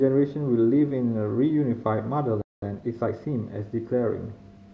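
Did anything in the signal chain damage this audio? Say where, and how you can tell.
Yes. A playback stall cuts the speech out from 2.41 to 2.62 s, a gap of about 0.21 s, before it carries on from where it stopped. That points to the playback stage, likely a starved buffer or a blocked output thread.

Time-compressed catch-up follows from 2.62 to 3.44 s. The speech runs about 1.25 times fast at unchanged pitch, built from short spliced and cross-faded segments, as the player drains the backlog the stall built up.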